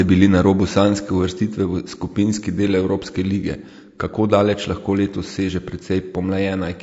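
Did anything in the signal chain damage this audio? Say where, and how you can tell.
Yes, at the codec stage. The speech sounds rough and grainy throughout. This is likely low-delay AAC compression, whose coarse coding at around 32 kbps leaves noise between the pitch harmonics.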